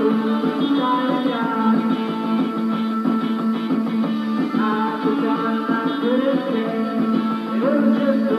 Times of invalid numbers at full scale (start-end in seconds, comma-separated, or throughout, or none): none